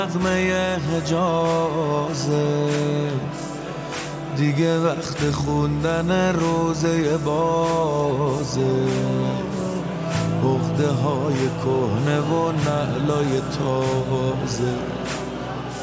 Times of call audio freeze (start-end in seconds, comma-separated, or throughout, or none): none